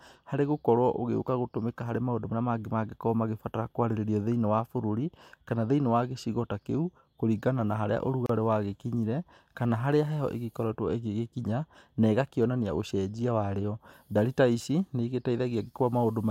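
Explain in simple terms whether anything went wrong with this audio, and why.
At 8.26 to 8.29 s the speech drops out into a brief silence of about 32 milliseconds, then carries on where it stopped. This is a gap at a join of encoded pieces: separately compressed sections were stuck together, leaving each one's padding silence in.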